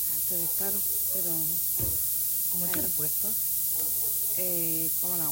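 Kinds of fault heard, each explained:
Low bit depth with noise shaping, throughout: the audio is quantised so coarsely that it fits about a 3-bit word, and the rounding error is fed back and pushed upward, producing a constant thin hiss climbing steeply toward the top of the band, only around 20 dB below the signal.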